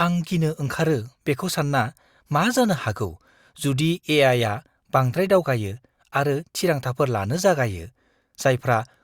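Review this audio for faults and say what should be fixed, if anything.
No faults; nothing to fix.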